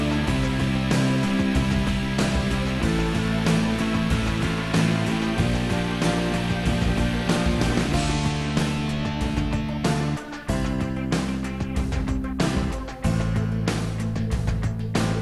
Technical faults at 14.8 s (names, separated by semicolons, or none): none